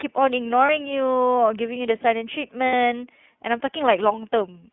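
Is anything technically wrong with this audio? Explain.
Yes. The speech runs through the iLBC codec for its whole length. Nothing is heard below about 150 Hz or above 3.4 kHz. Each frame is coded on its own, at a rate that fits iLBC's 13.33 kbps, 30 ms mode. The damage is plainly audible: a slightly rough, synthetic edge.

There are also lost iLBC frames, from 0.66 to 0.69 s and from 2.67 to 2.73 s. The decoder fills each gap by repeating the last pitch cycle mixed with noise. The gaps last about 30 and 60 ms, which fits one and then two lost frames. Each sounds like a brief, held, slightly buzzy or breathy vowel. The speech recovers almost immediately afterwards.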